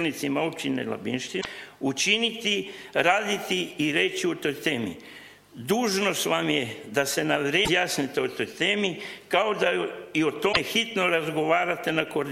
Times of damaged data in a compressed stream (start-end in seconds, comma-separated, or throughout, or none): 1.37-1.46, 7.62-7.69, 10.49-10.57